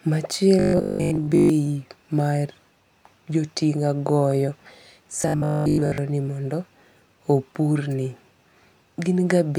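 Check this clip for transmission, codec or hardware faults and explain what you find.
Two stretches of robotic sound from repeated short buffers appear in this speech, from 0.60 to 1.50 s and from 5.22 to 5.98 s. The likely cause is audio arriving too slowly, so a 20 ms chunk loops in place of most of the real signal. That loop imposes a rigid 50 Hz metallic buzz that only loosely follows the talker.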